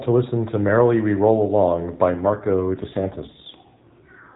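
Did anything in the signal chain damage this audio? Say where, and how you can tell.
Yes. From 2.12 s to the end, the speech turns rougher and more buzzy and synthetic, though the band stays the same and there is no gap or dropout. This is an AMR rate drop at the codec and network stage. A weak radio link prompts the network to lower the AMR-NB rate, already band-limited to 4 kHz, and put the freed bits into error protection. The degradation fits a step from 12.2 kbps down to around 5.9 kbps.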